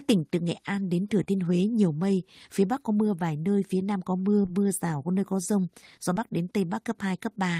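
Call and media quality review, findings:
Brief smear at 1.23–1.28 s; short concealed packet loss, about 40 ms missing, receiver concealment extended prior speech, then cross-faded back.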